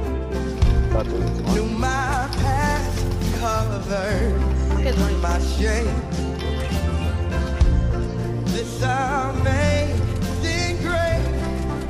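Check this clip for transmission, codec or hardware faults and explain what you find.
No transmission, codec or hardware faults turn up anywhere in the clip, and the signal arrives intact without any of the disruptions those paths would leave behind.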